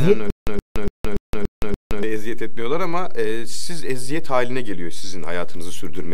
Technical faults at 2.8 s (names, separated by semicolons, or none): DC offset